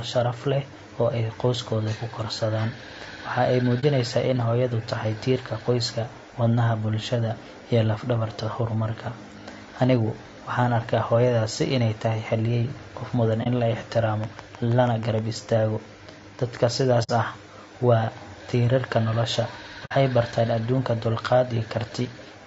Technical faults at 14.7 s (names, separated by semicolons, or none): low-delay AAC compression; train of clicks